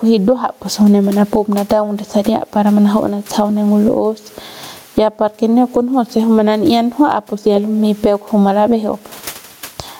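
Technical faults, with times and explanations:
Throughout, gain pumping: the gain swings by about 15 dB, likely from excess microphone gain into a fast limiter.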